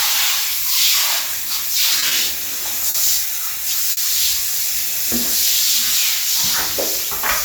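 At 1.99 to 2.05 s and 2.08 to 2.14 s, then 2.89 to 2.97 s and 3.92 to 4.00 s, the audio shows a short stall from a late packet. Each time a packet arrived after its playout slot and the jitter buffer emptied, so the receiver held the last sound for 30, 30, 50 and 50 ms respectively, then resumed where it stopped. Nothing is lost, but each stall pushes playback later by the same amount and is heard as a brief smeared hold.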